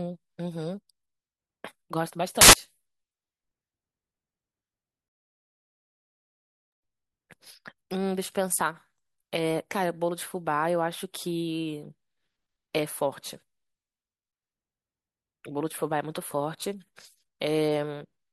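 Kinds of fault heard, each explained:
Samples built from the wrong bytes: for about 0.12 s, from 2.41 to 2.53 s, the speech turns into a burst of loud, harsh broadband noise as misassembled bytes promote the fast-changing low bits.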